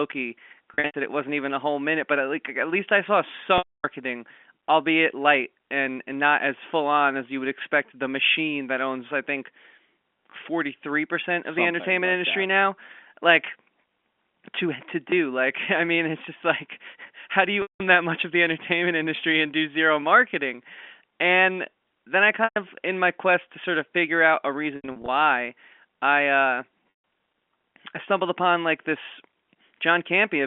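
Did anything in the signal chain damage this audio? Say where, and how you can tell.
Yes. The network stage dropped packets, and the receiver's packet loss concealment with pitch repetition looped the last pitch period to fill each gap. Losses begin at 0.74 s (before "it wasn't even a"), 3.58 s (after "at least I saw"), 17.62, 22.44, 24.76 (after "of figure out a") and 26.96 s. Short runs become a held, buzzy tone. The 260 ms gap at 3.58 s fades to silence and then cross-fades back, and the gaps' lengths fit 20 ms packets.

At 15.1 s the driver or buffer stage underran and replayed a 10 ms buffer twice more, costing about 20 ms of new audio. Three identical 10 ms slices with hard joins are too short to hear as a stutter, so this repeated buffer comes through as a brief click-buzz.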